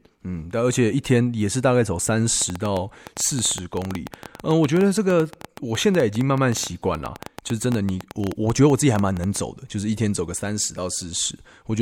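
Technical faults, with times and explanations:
2.42 to 9.37 s: train of clicks. Some seventy near-identical pulses arrive unevenly, about 9.2 per second, ticking over the speech and through its pauses. The peaks stand roughly 10 dB above the signal. The likely cause is interference from nearby equipment or a faulty connection or power supply.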